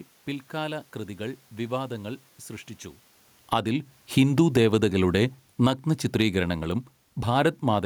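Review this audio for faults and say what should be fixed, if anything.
Automatic gain falling runs from 3.37 s to 7.78 s, a slow cut of about 8 dB. Just after the talker shifts position around 3 s, the gain control judges the input too loud and lowers its gain over roughly four seconds. The voice sinks steadily, and the room noise sinks with it, so the whole recording drops together. That shared fade is what separates this from the talker simply moving away. Prevention: slow the control's release and raise its threshold so a brief loud moment does not start a long cut.

Automatic gain rising occurs from 3.59 s to 4.09 s, a boost of about 9 dB over half a second, overlapping the start of the fall. Here the control judges the input too quiet and pushes its gain up, so voice and background swell together. Because this rise lands inside the longer fall, the level pumps up and then keeps sinking. 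The two adjustments fight each other after the talker's movement. Prevention: use a single gain stage with a hold time and a slower attack so small level shifts from movement are left alone.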